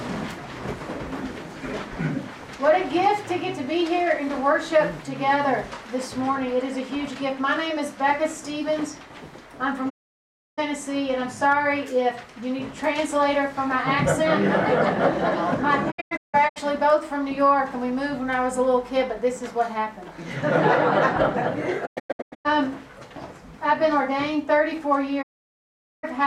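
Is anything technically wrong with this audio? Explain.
Yes. Digital broadcast dropouts mute the audio four times: solid gaps at 9.88–10.60 s and 25.21–26.05 s, and clusters of short holes at 15.90–16.58 s and 21.85–22.47 s. The receiver lost valid frames and silenced its output, with 20 ms fades at the edges. Waveform and spectrogram show blank stretches.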